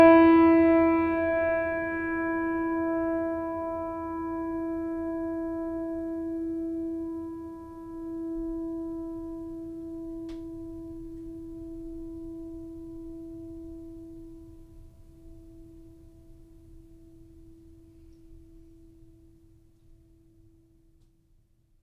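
A music recording with no technical faults to report. Nothing in the audio points to a problem anywhere along its path.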